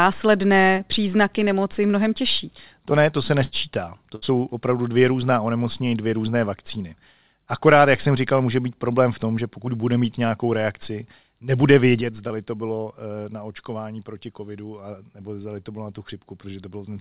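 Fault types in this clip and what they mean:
Burst of packet loss: Twice the speech hits a run of packets that never made it in time, and the receiver bridges the hole by stretching the last sound out while fading it. Right after "ne to se", at 3.44 to 3.54 s, you get about 75 ms of that held, dying sound, and roughly 80 ms of real speech is simply gone. At 4.16 to 4.24 s, just before "opravdu dvě různá onemocnění", it happens again with about 64 ms filled and 60 ms skipped.
Sudden gain jump: At 12.01 s, right after "mít nějakou reakci nebude", the whole level drops by about 7 dB in one step, with no fade. The speech and the background noise fall together, and the level stays down until the clip ends. That pattern most likely comes from a digital gain setting or bit shift that was applied instantly instead of being ramped, so nothing smooths the transition.
Short concealed packet loss: A much smaller hole appears at 12.28 to 12.32 s, shortly after the level drop. 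About 20 ms never reached the decoder in time, and the receiver patched it with roughly 18 ms of sound extrapolated from what came before, then blended back into the real audio. It registers as a quick smear or wobble in the speech rather than an obvious gap. The telephone-band sound of the call path, with nothing above 4 kHz, is a separate thing that fits a narrowband G.711 link.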